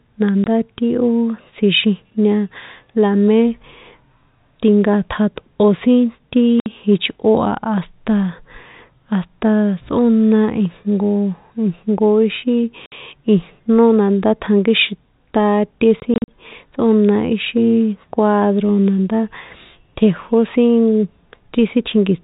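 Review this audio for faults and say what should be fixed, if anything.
Packet loss filled with silence: speech packets were lost and the receiver played silence in their place, leaving hard-edged holes at 0.44 to 0.46 s, 6.6 to 6.66 s just after "sin ti", and 12.86 to 12.92 s just before "ijnó nandá tjankíxin taté". A longer burst from 16.0 to 16.28 s, just after "ijnó nandá tjankíxin taté", scatters about 120 ms of gaps across 280 ms, the longest lasting 40 ms. The gap lengths fit 20 ms packets. Beneath the dropouts, the G.711 A-law telephone band at 64 kbps is audible as a cutoff above 4 kHz. To prevent this, use a jitter buffer with packet loss concealment or forward error correction so lost packets are rebuilt instead of muted.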